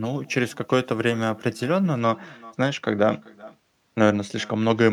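With no echo canceller on the far end, a loudspeaker there feeds the call back into its microphone, so throughout this speech clip every phrase returns roughly 0.4 s later as a faint, thin copy about 25 dB below the direct voice. From 1.95 s to the end, one channel lags the other by only a couple of samples before the two are summed to mono, causing channel delay (comb filtering). Content shared by both channels cancels, with the first notch around 10 kHz, which dulls the top end.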